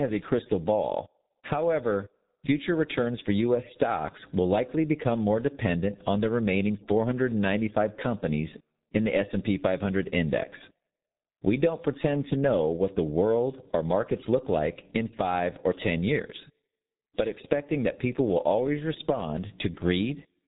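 Throughout the speech, the signal has passed through the G.723.1 codec at about 6.3 kbit/s, which slices audio into 30 ms frames, models the voice coarsely and discards everything above 3.8 kHz. The damage is heavy: the speech sounds muffled and hoarse, and consonants smear together.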